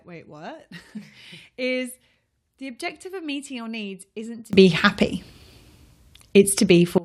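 At 4.53 s, right after "your needs isn't to", the speech suddenly jumps up in level by about 22 dB and stays there until 6.98 s. It's a sudden gain jump: the speech and the background noise get louder together, in a single step with no fade. That's most likely a digital gain setting being changed from one sample to the next without any ramp to smooth the transition.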